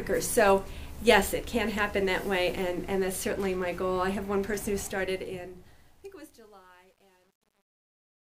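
From 4.76 s to the end, the fade-out shows truncation distortion. The level stage keeps too few bits, which fits a 10-bit path, and adds no dither. From 5.49 s onward, the tail turns gritty.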